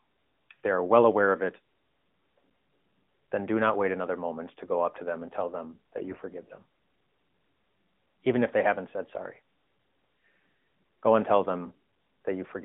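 AMR bit errors from 5.98 to 6.25 s, right after "them and tell them": flipped low-priority bits misplace excitation pulses and skew gain, making the narrowband speech turn hoarse and gargly.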